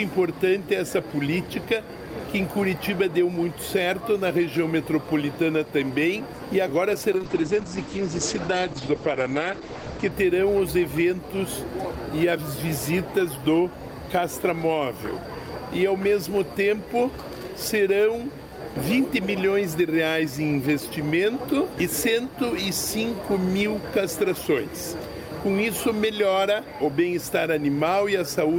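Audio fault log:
7.13–10.17 s call bitrate drop: the encoder's bit budget collapsed, consistent with roughly 9 kbps, coarsening the coding and cutting highs above 8 kHz, so sound turns rough and muffled.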